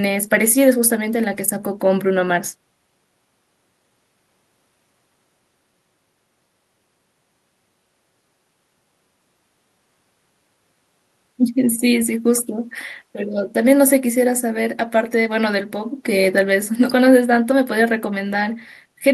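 No technical faults are audible.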